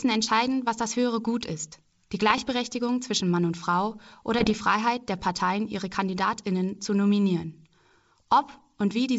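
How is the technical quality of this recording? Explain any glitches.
Two short bursts of bit errors on an ADPCM link mar the speech, at 2.30–2.56 s and 4.39–4.57 s, the second denser, about 0.7% of bits flipped. Each flipped bit upsets the decoder's step size and predictor, so pops ring into rough, level-jumping crackle, seen as spiky waveform bursts and vertical broadband streaks on a spectrogram.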